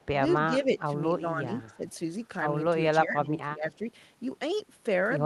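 At 0.84–0.9, 1.11–1.49, 1.71–1.82 and 3.01–3.81 s, speech suppressed in double talk, likely from echo cancellation, drops the speech by up to about 15 dB, appearing as waveform notches and faded spectrogram bands.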